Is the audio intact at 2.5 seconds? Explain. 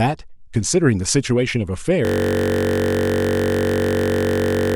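No. At 2.5 s the clip is inside a system hang loop that begins at 2.05 s and runs to the end. The sound hardware keeps replaying one 21.33 ms stretch of speech, which fits a 1024-sample buffer, well over a hundred times, so the voice becomes a steady buzz at 46.9 Hz. On a waveform this shows as identical cycles repeating exactly, and on a spectrogram as flat horizontal lines spaced 46.9 Hz apart.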